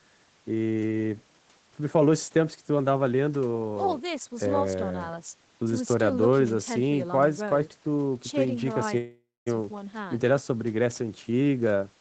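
At 8.97 to 9.48 s there's a call audio freeze: the sound smears into a fading buzz or hiss, goes silent for about 0.22 s, then picks up where it stopped, likely from packets stalling and draining the jitter buffer.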